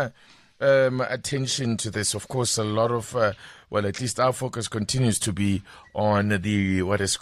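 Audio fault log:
No audible faults detected in this speech clip.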